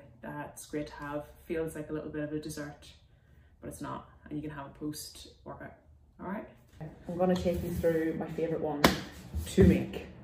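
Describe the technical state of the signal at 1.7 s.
At 1.7 s the signal is intact, with no audible technical fault at that point.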